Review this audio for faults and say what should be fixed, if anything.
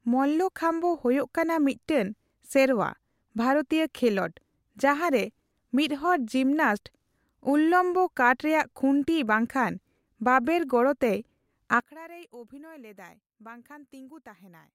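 From 11.8 s to the end, the speech drops by about 21 dB to a quieter residue. The likely cause is one channel inverted, cancelling the shared content on mono summing. Unlike a dropout, sound remains; unlike a gain change, only the left-right difference survives. Check channel polarity before mono downmixing.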